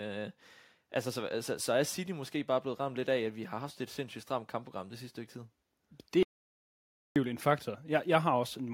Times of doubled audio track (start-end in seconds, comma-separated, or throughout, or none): none